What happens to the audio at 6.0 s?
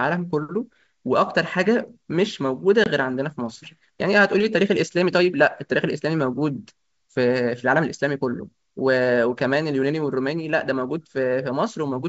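Nothing goes wrong at 6.0 s: the speech passes through intact, carried by ordinary G.722 wideband telephone coding with no audible fault at that moment.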